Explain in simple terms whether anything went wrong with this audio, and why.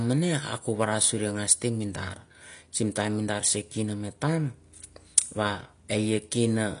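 The speech sounds dull and smeared from start to finish, with nothing above 10 kHz and a warbling, fizzy edge on hissy sounds. Heavy AAC compression is the likely cause. Simple muffling would also sound dull, but it wouldn't warble or fizz like this.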